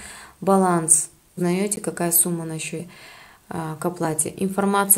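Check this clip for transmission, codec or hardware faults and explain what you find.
Three faults turn up: two spots where compressed frames were skipped, and one brief block of digital silence.

Compressed frames skipped, at 1.37 to 1.40 s and 2.78 to 2.82 s: the decoder dropped frames of roughly 46 ms each, so the audio jumps ahead about 100 ms, then about 150 ms.

Block of digital silence, at 1.76 s: the output buffer likely went unfilled for about 12 ms, which fits a 512-sample buffer. The hard cut to zero and back is heard as a tick or dip.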